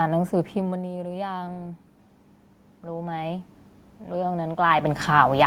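From 4.1 s to the end, there's automatic gain rising: the input dropped about 11 dB, so the gain creeps up and voice and room noise swell together.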